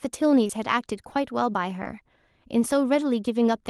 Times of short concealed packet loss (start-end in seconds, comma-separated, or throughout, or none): 0.43-0.51, 1.83-1.87